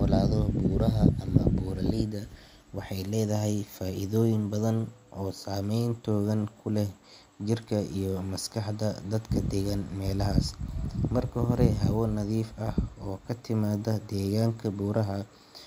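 No technical faults are audible anywhere in this speech recording.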